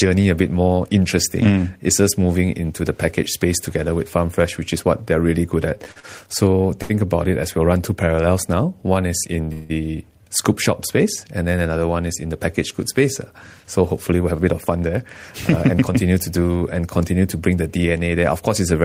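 Speech that drags and stutters between 5.77 and 6.05 s, where the sound catches four times, with about 99 ms of held-over audio and no gap longer than 40 ms. These are repeated stalls (a stutter): packets kept arriving late, the jitter buffer kept running dry, and the receiver filled each wait by continuing the last sound, so roughly a third of that stretch is concealment. At 6.82 s a sound is held too long for 73 ms with a slight buzz or dip, a short stall from a late packet. The receiver stretched the preceding audio until the packet turned up, then resumed from the same point, adding delay rather than losing anything. From 9.53 to 9.71 s the speech stops moving and a decaying buzz or hiss fills 166 ms without reaching silence, then picks up where it left off. This is a call audio freeze, likely from packets held up in transit and an emptied buffer. Finally the speech sounds hurried without any pitch change, at 108% speed from 13.64 to 14.99 s and at 113% from 15.68 to 15.97 s. 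This is a jitter buffer speed-up: with too much audio queued, the receiver trimmed many short pitch-period slices, about 150 ms and then around 50 ms, to bring the delay back down.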